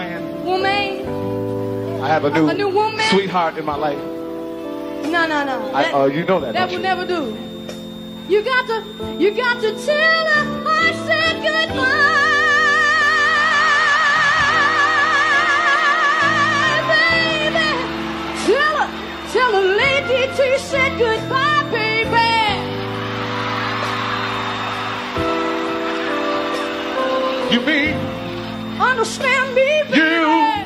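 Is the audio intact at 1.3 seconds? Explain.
Yes, the audio is intact at 1.3 seconds, with no dropout, click, distortion or other fault at that moment.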